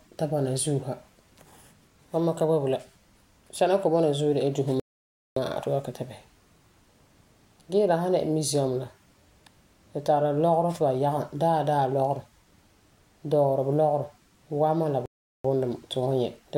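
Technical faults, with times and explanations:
4.80–5.36 s and 15.06–15.45 s, playback stall: the player likely ran out of buffered data or had its output thread blocked, so the output fell silent, for 0.57 s just after "de la dusi" and for 0.39 s later, cutting the speech off mid-flow until playback recovered.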